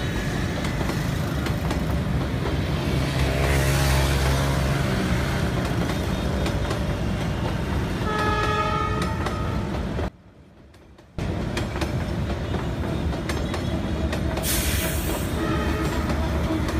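From 10.08 to 11.19 s the sound collapses by about 22 dB into a faint residue, likely from one channel inverted, so shared content cancels in mono. The waveform shows a sudden narrow band, and the spectrogram thins.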